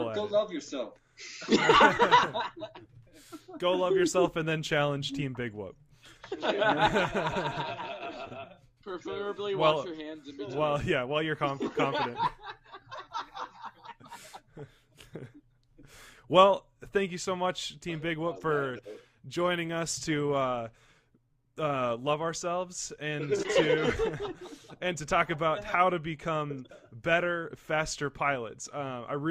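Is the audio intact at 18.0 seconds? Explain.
Yes, the audio is intact at 18.0 seconds, with no dropout, click, distortion or other fault audible at that point.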